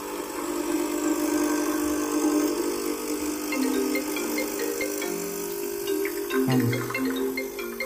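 From 0.72 to 6.87 s there are periodic USB or driver dropouts: roughly a millisecond of silence lands every 1.02 s, so you get a regular tick.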